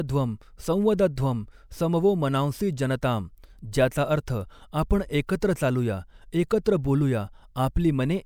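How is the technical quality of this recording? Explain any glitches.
Listening through the recording, nothing stood out as a technical problem.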